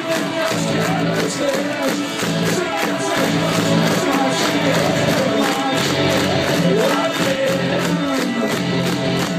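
At 2.42 s the audio jumps forward by roughly a tenth of a second, the first instance of compressed frames skipped. A run of coded frames never reached the output, so the decoder resumed further along. The gap fits a whole number of 23.2 ms frames, and because adjacent frames overlap during reconstruction, the join is a short smeared blip rather than a sharp click.

From 3.15 s to 7.36 s a doubled audio track is audible. A second full-band copy of the sound runs about a second and a half behind the first, at roughly the same level, with no decay or room colouring. It starts and stops abruptly at those boundaries. The likely cause is a second, slower capture path or an edit that left two misaligned copies layered together.

Two more frame skips occur at 4.11 s, losing around 150 ms, and at 7.46 s, losing around 50 ms. Each again matches a multiple of the 23.2 ms frame length and produces the same brief smeared transition.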